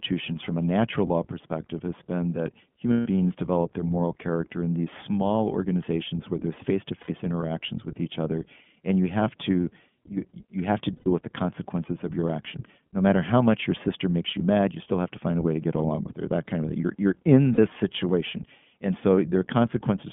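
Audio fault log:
throughout, iLBC codec: the speech passes through a narrowband VoIP codec at 15.2 kbps in 20 ms frames, with the line band held to roughly 150 Hz to 3.4 kHz. Each frame's excitation is coded on its own, so the voice is audibly rough, slightly synthetic and muffled, with nothing above 4 kHz.
2.92–3.07 s, lost iLBC frames: a 140 ms gap where packets went missing and the decoder filled in by repeating the last pitch cycle blended with noise, fading as the loss ran on. It sounds like a held, faintly buzzy vowel.
7.02–7.11 s, lost iLBC frames: after "small organizations where there's", 60 ms of missing frames is concealed by a repeated pitch cycle mixed with noise, heard as a brief breathy hold before "interactions with each other" comes back cleanly at once.
10.97–11.08 s, lost iLBC frames: after "you you have to", a 100 ms loss is bridged by the decoder looping the last pitch period with added noise, a short buzzy smear, and "with the consequences of" returns intact straight away.
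17.54–17.60 s, lost iLBC frames: after "you're in", a 40 ms loss gives only a very brief held, slightly buzzy sound from the repeated pitch cycle. Since frames stand alone, "situation and" is clean immediately.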